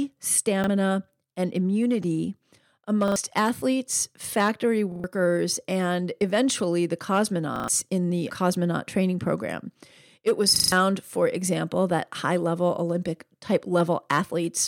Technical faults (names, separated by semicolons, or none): repeated buffer